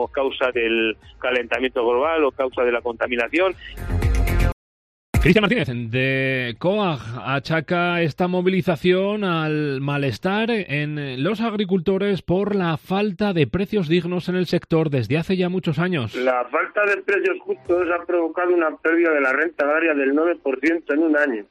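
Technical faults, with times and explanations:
4.52–5.14 s, playback stall: The player most likely ran short of buffered data, or its output thread was held up, so nothing reached the output for about 0.62 s. The sound breaks off abruptly in mid-flow and leaves a clear gap of silence. When output returns, the audio picks up again rather than resuming smoothly, so the break is heard as a sudden hole rather than a fade or dropout of level.
5.14–5.74 s, time-compressed catch-up: Having fallen behind during the stall, the player clears its backlog by removing short slices of audio and cross-fading the joins, running at 2.0 times normal speed for 0.6 s. Because it skips material instead of resampling, pitch stays where it was while the sound rushes forward. The passage sounds hurried until normal pace returns at 5.74 s.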